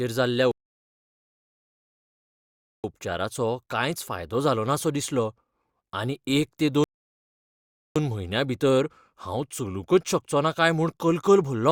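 At 0.51 s the speech halts in a rebuffering stall: playback runs dry and holds silence until 2.84 s, adding about 2.33 s. A second stall follows "आनी एक ते" at 6.84 s, resuming at 7.96 s with "म्हयन्यां भितर हांव चलूंकच", adding 1.12 s. Both resume seamlessly, with nothing skipped.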